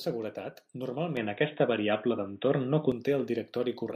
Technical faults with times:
1.17-2.92 input switched to a poorer device

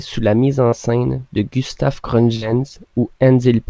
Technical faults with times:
0.68-0.74 short concealed packet loss
2.36-2.43 burst of packet loss

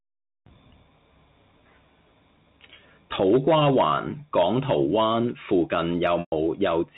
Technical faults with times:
6.20-6.32 packet loss with pitch repetition

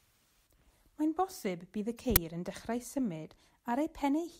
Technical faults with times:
2.16 uninitialised buffer

